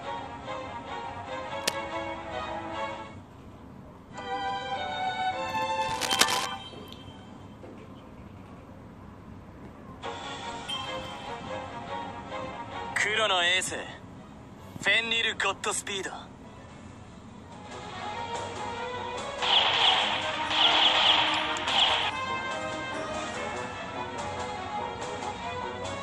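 Two bursts of cable scratch noise show up, first from 1.62 to 1.84 s and then a longer one from 5.81 to 6.46 s. Each is a dense, ragged rustle sitting right on top of the sound, roughly as loud as the sound itself, so it's hard to miss. The likely culprit is a worn cable or connector being moved, with its contact resistance jumping around and spraying uneven noise into the signal.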